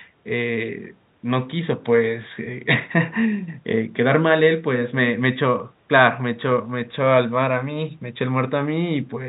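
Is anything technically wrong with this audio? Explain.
No, the speech sits about 42 dB above a room-noise floor and the band stops at 4 kHz, which fits a narrowband G.711 mu-law call path at 64 kbps working as designed.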